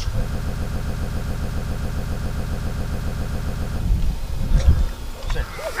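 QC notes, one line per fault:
0.35 to 3.79 s, broken-record loop: A fragment of about 136 ms repeats exactly, back to back, 25 times. The result is a rapid, mechanical stutter lasting nearly 3.4 s, with no variation between repeats. The stall is likely in the player, encoder or stream, which kept sending the last piece it held. Whatever audio belonged in that span never plays, so the sound jumps ahead when normal playback resumes.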